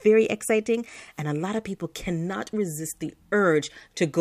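Nothing in this short bit of speech stands out as a technical fault, so there's nothing to flag anywhere along the way.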